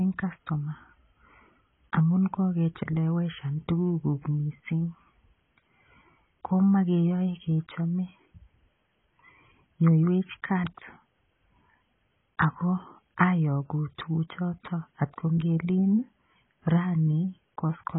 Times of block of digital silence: none

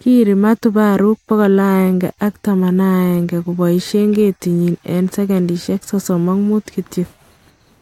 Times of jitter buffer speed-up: none

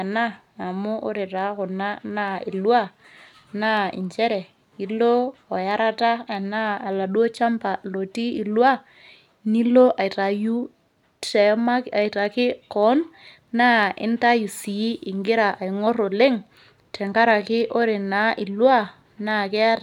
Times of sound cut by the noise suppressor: none

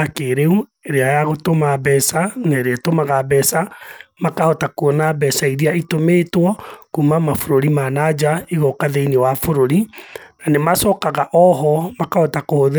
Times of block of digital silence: none

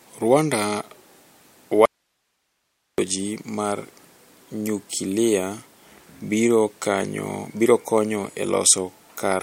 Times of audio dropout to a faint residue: 1.86-2.98

